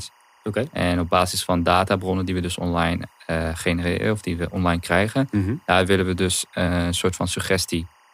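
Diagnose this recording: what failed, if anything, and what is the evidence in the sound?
Timecode bleed in the analogue wiring runs throughout the speech: a steady chirping warble around 1 and 2 kHz, roughly 35 dB below the voice. Linear timecode at 24 frames per second leaks from an adjacent track or cable, its square wave switching between those two pitches.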